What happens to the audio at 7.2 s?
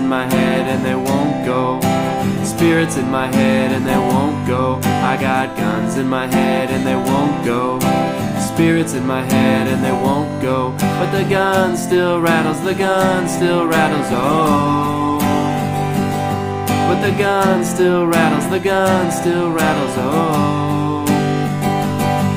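Nothing goes wrong at 7.2 s; the audio plays through that moment intact, with no audible fault.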